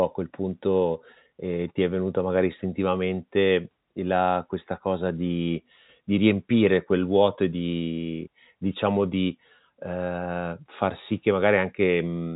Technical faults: none

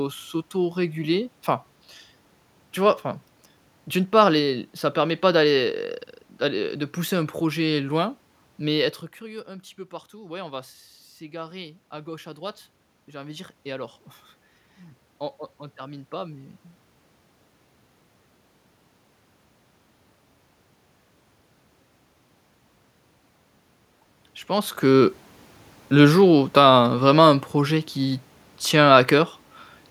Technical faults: automatic gain rising

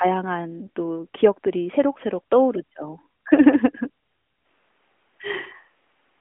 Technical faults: switch to a distant microphone

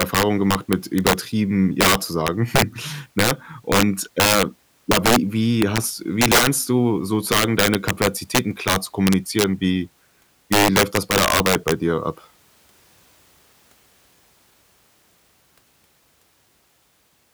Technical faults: integer overflow

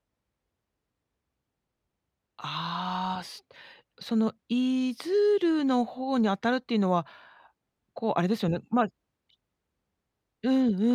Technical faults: none

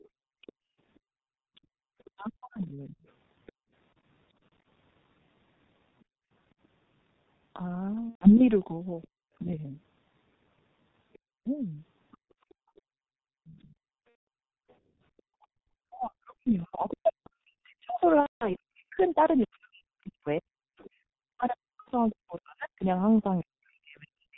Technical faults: G.723.1 codec; other side's voice leaking through; background gated by the echo canceller; speech suppressed in double talk; VoIP packet loss concealed by the speech codec

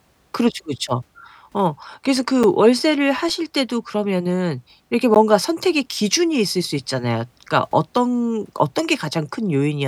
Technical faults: block of digital silence

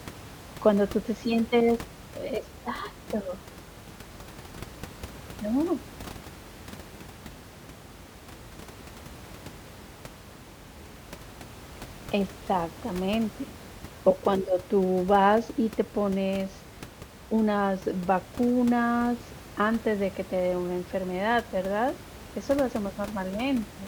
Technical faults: none

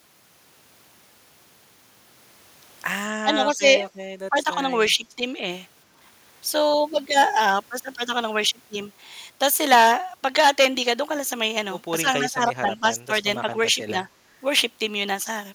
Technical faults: speech suppressed in double talk

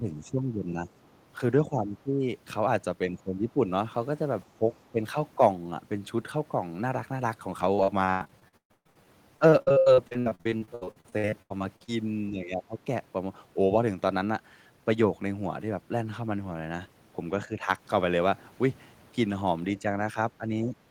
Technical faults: speech suppressed in double talk; repeated packet loss (robotic sound)

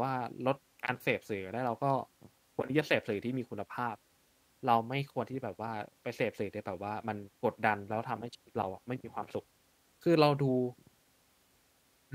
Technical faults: none

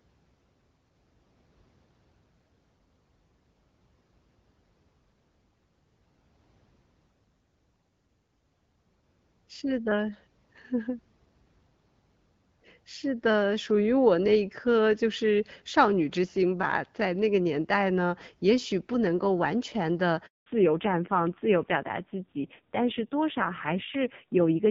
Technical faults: handover gap; fallback to narrowband

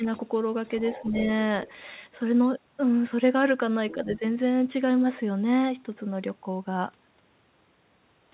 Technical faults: other side's voice leaking through; speech suppressed in double talk

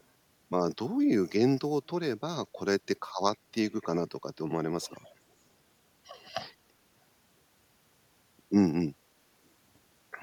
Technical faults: echo leak

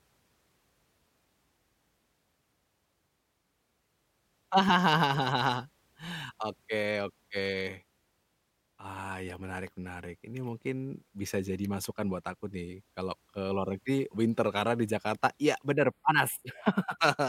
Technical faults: channel delay (comb filtering)

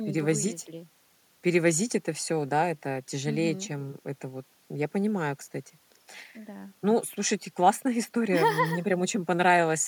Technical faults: none

